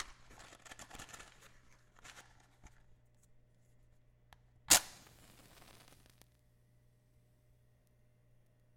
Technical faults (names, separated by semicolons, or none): compressed frames skipped